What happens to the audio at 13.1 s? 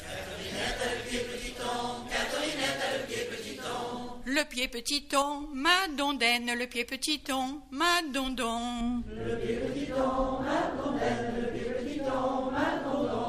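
Nothing goes wrong at 13.1 s, and the audio plays through that moment intact.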